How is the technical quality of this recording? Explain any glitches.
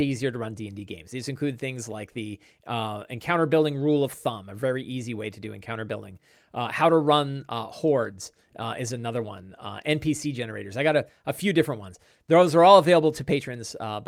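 No technical faults can be heard anywhere in the recording; the signal stays continuous and stable throughout.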